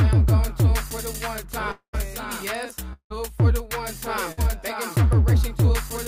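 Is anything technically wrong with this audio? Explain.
Yes. From 1.71 to 1.95 s and 2.93 to 3.12 s, the sound smears into a fading buzz or hiss, then goes silent; a long network dropout likely cut roughly 0.2 s each time.

At 4.32 s, a burst of packet loss removes about 60 ms. The concealment fades only briefly before the audio resumes.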